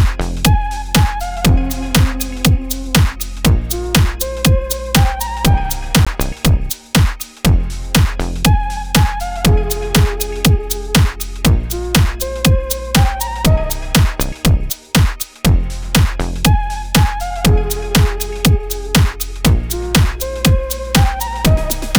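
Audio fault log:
6.05 s and 8.20 s, block of digital silence: a short hole and then a tick as the audio drops abruptly to silence for about 17 ms, then 4 ms, with unfaded edges.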